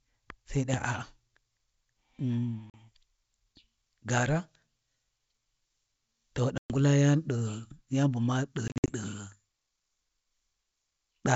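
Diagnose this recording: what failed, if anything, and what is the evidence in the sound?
The network dropped packets on a G.722 wideband call, which is packet loss on an ADPCM call. Hard-edged silent holes appear at 2.70–2.75 s (40 ms, a couple of packets), 6.58–6.72 s (120 ms) and 8.68–8.94 s, where 140 ms goes missing in pieces across 200 ms, the longest run 60 ms. Each gap ends with a click, wrong level or brief distortion, settling within tens of milliseconds as the decoder's predictor and step size resynchronise. That recovery transient distinguishes it from a clean buffer underrun.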